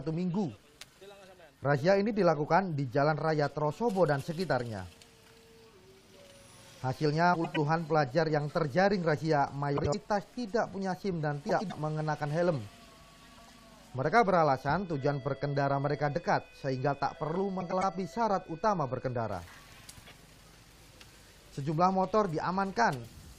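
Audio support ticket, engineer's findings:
Frames out of order at 7.34–7.57, 9.76–9.95, 11.49–11.72, 13.37–13.58 and 17.60–17.83 s: garbled flutter. Probable reorder on arrival; adjacent blocks of about 104 ms (78 ms at 9.76 s) swapped. Waveform shows envelope jumps at three joins. No time lost.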